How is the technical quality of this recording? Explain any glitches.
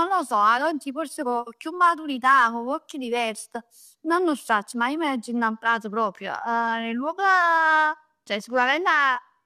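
Nothing in this speech recording calls for explanation, since no glitches turn up anywhere in it.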